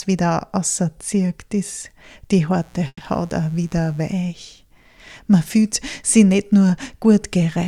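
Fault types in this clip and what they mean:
Mains buzz: a steady, raspy buzz built on 60 Hz and its harmonics, rising well into the kilohertz range, sits about 35 dB below the sound from 2.53 to 4.16 s. A spectrogram shows evenly spaced horizontal lines across that stretch, and the waveform carries a fine, repeating spiky ripple.
Call audio freeze: around 2.87 s the sound stalls and the last moment is stretched into a fading tail for about 130 ms, ending in roughly 40 ms of silence. Then the audio resumes where it stopped, with nothing lost and everything after it shifted 130 ms later. The likely cause is delayed packets draining the jitter buffer. A spectrogram shows a smeared, decaying band followed by a blank gap. The waveform shows a tapering patch dropping to flat.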